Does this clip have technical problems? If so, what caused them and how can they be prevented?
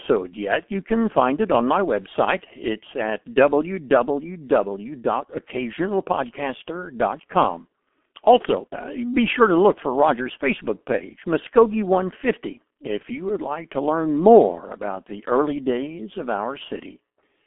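Yes. The speech is coded throughout with the G.723.1 codec, which fits a rate of about 6.3 kbit/s. The band runs from roughly 250 Hz to 3.4 kHz, with nothing above 3.6 kHz, so the speech is muffled and thin. The codec damage is heavy: its slow-updating 30 ms voice model smears consonants and adds a hoarse, rough texture. To prevent it, use a wideband or higher-rate codec for the call path.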